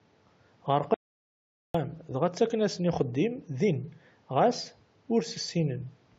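Speech, with an audio dropout to silence from 0.94 s to 1.74 s. The sound cuts off abruptly and about 0.8 s is lost. The gap is silent. Even the room noise, about 36 dB below the speech, disappears. The input was likely lost while recording continued.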